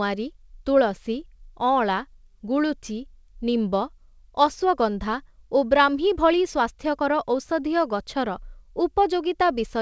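No technical faults occur at any point in this speech, so there is nothing to describe in time order.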